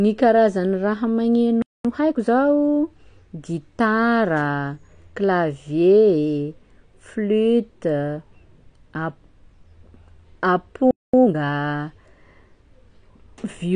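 Across the whole speech clip the sound is dull and smeared, with plainly audible codec damage and nothing above 9.8 kHz. This is AAC compression, likely AAC-LC at a low rate; the band limit and the damage fit roughly 32 kbps. At that rate the encoder quantises its frequency lines coarsely against a hearing model and drops the upper spectrum, so the top end vanishes and detail blurs.

At 1.62 s, just after "karazan'ny raha", the speech cuts out into silence for about 225 ms before resuming at 1.85 s. This is a playback stall: the player likely ran out of data or had its output thread blocked, so nothing reached the output until it recovered, and the gap lands mid-flow rather than at a natural pause.

From 1.85 s to 2.29 s the speech comes out hurried at 1.5 times normal speed but at its normal pitch. This is time-compressed catch-up: to shed the backlog built up during the stall, the player cut out small pieces and cross-faded the remainder together.

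A second playback stall follows at 10.91 s, silencing the speech for about 227 ms until 11.14 s, again most simply explained as a data underrun or a blocked output thread.

Time-compressed catch-up follows again from 11.14 s to 11.36 s, this time at 2.0 times normal speed. The faster rate means more material is cut and spliced in that short window, so the delivery sounds more rushed than in the first catch-up while the pitch stays unchanged.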